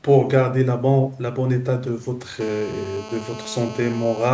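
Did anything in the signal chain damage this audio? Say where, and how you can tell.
Yes, there's GSM phone buzz in the analogue wiring from about 2.41 s to 4.29 s: a harsh, raspy 217 Hz buzz packed with harmonics, about 16 dB below the speech and nearly steady. A nearby phone on a call is pulsing its transmitter, and the audio circuitry rectifies those radio bursts.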